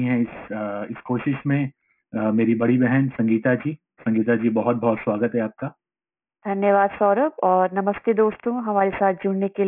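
Aliasing runs through the whole speech clip, from start to finish. Everything reaches right up to a hard ceiling at 3 kHz, and the hiss and sibilant energy that should sit above it comes back folded below it as gritty, metallic tones at unrelated pitches, roughly 20 dB under the speech. That points to a drop from 44.1 kHz to a 6 kHz sample rate done without a low-pass filter at the new 3 kHz limit first.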